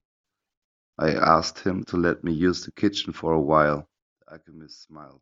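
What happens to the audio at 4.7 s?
At 4.7 s the speech has collapsed to a faint remnant, about 20 dB quieter, from 4.04 s to the end of the clip at 5.21 s. The likely cause is one channel inverted: one stereo side has reversed polarity, so the centred speech cancels on mono summing and only the small difference between channels survives. The waveform shrinks abruptly at 4.04 s, and the spectrogram fades sharply.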